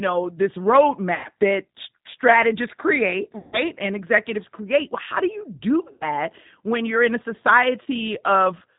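Across the whole recording the speech is band-limited and slightly rough, with a thin, synthetic edge and nothing audible above 4 kHz. That is the signature of the G.729 codec, here at 8 kbit/s. Each 10 ms frame is rebuilt from a vocal tract filter, a pitch predictor and a handful of pulses rather than the original waveform, so the damage is plainly audible.

At 1.15 to 1.28 s, between "know this" and "that strategists create", the speech smears into a fading buzz or coloured noise. This is VoIP packet loss concealed by the speech codec. About 90 ms of audio went missing, which fits three lost packets, and the decoder stretched its last pitch and filter at falling gain until the signal returned. After "that strategists create", a longer fade runs from 3.38 to 3.62 s, covering roughly 150 ms of missing audio. The same happens from 5.92 to 6.05 s, just before "when you're in a", and again briefly at 7.83 to 7.87 s, where about 30 ms is lost. 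After each gap the voice stays weak or distorted for a moment while the decoder recovers.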